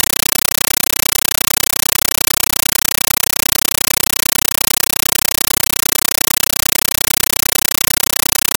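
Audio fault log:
throughout: compressed stream played as audio. Instead of speech, the clip is very loud, chattering static. It comes in bursts about 9.33 ms long at 31.25 per second, each followed by silence, which fits a Dolby Digital (AC-3) stream of around 448 kbps passed along as ordinary samples and never decoded. Each burst is one encoded frame heard as raw data, followed by its zero padding. That steady 31 Hz on-off rhythm separates it from random digital noise or a wrong sample format, which hiss continuously.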